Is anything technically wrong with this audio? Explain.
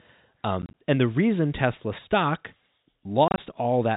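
Yes. Packet loss filled with silence occurs twice. From 0.62 to 0.74 s, just before "and the reason", about 60 ms of sound drops out in short gaps spread over 120 ms. From 3.28 to 3.38 s, about 70 ms drops out over 100 ms. The receiver plays digital silence where packets went missing, so the speech stutters through hard-edged holes. The longest gap is 30 ms, and the gap sizes fit 10 ms packets. The G.711 telephone band, with nothing above 4 kHz, can be heard throughout.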